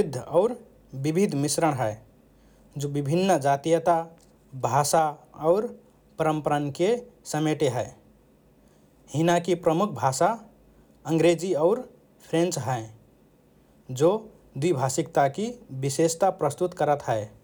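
No technical faults can be heard anywhere in this speech recording. Nothing in it points to a dropout, glitch or other processing problem at any moment.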